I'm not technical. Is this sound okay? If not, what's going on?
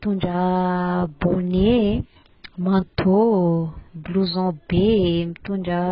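No. The speech was likely squeezed hard through AAC compression, which throws away detail to save space. Throughout the clip nothing remains above 5.3 kHz, so it sounds dull and muffled, with a smeared, warbly, fizzy edge on hissy sounds.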